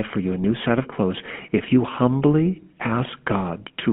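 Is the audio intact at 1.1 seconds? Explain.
No. At 1.1 seconds the speech carries GSM full-rate codec damage that runs through the whole clip. The codec models the vocal tract and drives it with a sparse pulse excitation, which fits a 13 kbps stream, and the line band spans roughly 150 Hz to 3.4 kHz. The result is a plainly audible buzzy, gravelly roughness with no top end.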